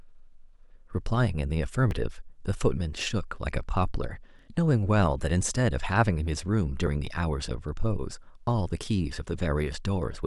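At 1.91, 4.39 and 6.87 s the speech jumps ahead with a small skip, roughly 20 ms gone each time. That's likely audio missing between chunks, with a sliver dropped at each handover between 2.5-second blocks and the edges butted together.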